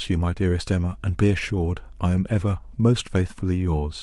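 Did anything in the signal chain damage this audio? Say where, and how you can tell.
Yes. Mains hum from 0.92 to 2.80 s: a steady 50 Hz tone roughly 25 dB below the speech points to a ground loop or transformer coupling into the analogue wiring.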